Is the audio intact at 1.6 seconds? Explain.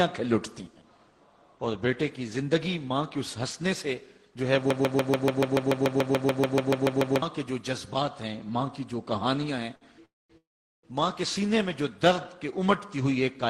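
Yes, the audio is intact at 1.6 seconds, with no dropout, click, distortion or other fault to be heard at that moment.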